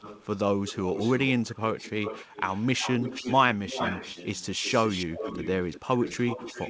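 A delayed copy of the speech trails it by about 0.3 s, faint at 0 to 0.26 s and louder from 0.66 to 3.35 s and from 3.68 s to the end. This echo leak likely comes from one side playing the call on a loudspeaker, where the echo canceller did not remove all of what its microphone picked up.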